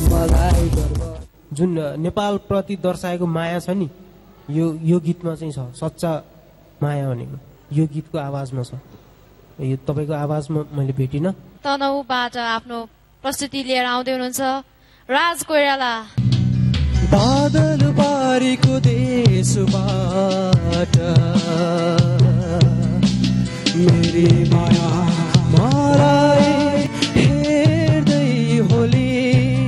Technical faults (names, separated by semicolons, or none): doubled audio track